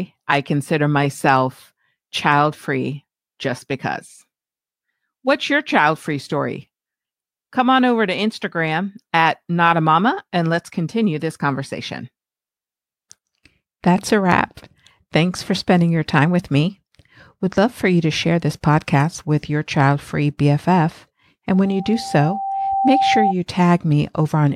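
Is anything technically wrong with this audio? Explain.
Yes, there's a loudspeaker feedback squeal near the end, from 21.54 to 23.34 s. A single tone at 782 Hz swells up over about a second and a half until it's roughly as loud as the speech itself. What's happening is that the mic is hearing the speaker it feeds, and at that one frequency the loop gain tips past one, so the tone keeps reinforcing itself round the loop until it rings out as a steady squeal.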